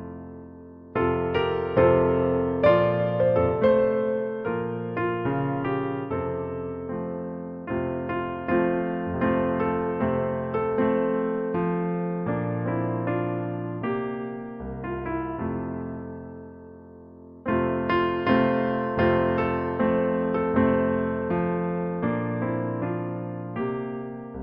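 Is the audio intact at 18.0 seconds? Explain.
Yes, the audio is intact at 18.0 seconds, with no dropout, click, distortion or other fault at that moment.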